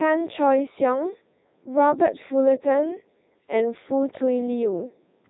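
From start to finish the speech passes through the Codec 2 vocoder, heavily damaged. The decoder rebuilds the voice from sine waves using only pitch, voicing and envelope, so the speech turns robotic and buzzy rather than smeared or warbly. Nothing remains above 3.8 kHz, which fits the 3.2 kbit/s mode.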